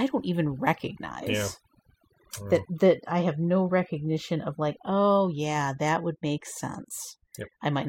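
From start to finish you've got overdone noise removal. The denoiser was set far too hard, so any band it judged close to the noise got switched off, taking the quieter bits of speech with it. Gaps sit near-silent with twinkly specks.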